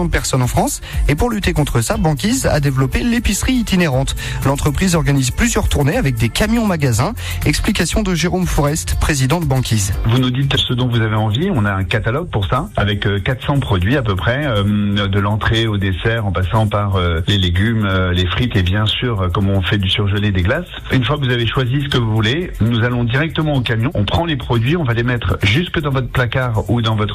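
No technical faults occur at any point, so there is nothing to describe in time order.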